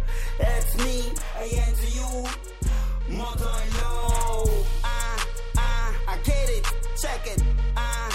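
From 1.18 to 4.03 s the sound doubles into a slap copy at equal level; this channel delay (doubling) comes from one channel arriving 40 ms late before mono summing.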